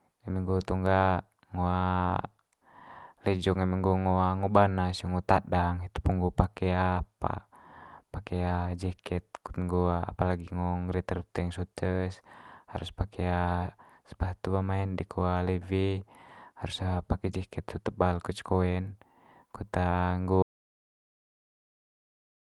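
At 20.42 s the speech cuts off abruptly and the rest of the recording is silent, with no room tone and no return of sound. This is an audio dropout to silence, likely from the input being lost while the recorder kept writing silence.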